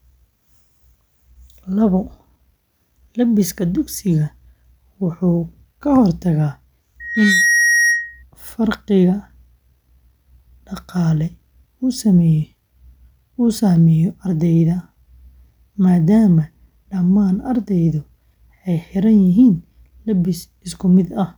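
A speech recording with a loudspeaker feedback squeal from 7.00 to 8.23 s. A microphone is hearing the loudspeaker it drives, and at 1.9 kHz the loop gain tops one, so that tone feeds itself. It swells within about a third of a second to roughly the speech's own level. On a spectrogram it is a single bright horizontal line at 1.9 kHz. The waveform shows a dense, steady-amplitude block until the loop breaks.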